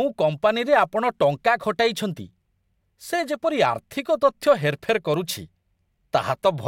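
Bit error spikes at 1.47 s and 5.14 s mark this speech clip, each a single sharp tick unrelated to the talking around it. In each case one sample has had a bit flipped in memory or on a digital link, so its value jumps by a power of two and falls straight back. The first spike peaks at about -31 dBFS, the second, louder one at about -19 dBFS, and both spread their energy across the whole spectrum.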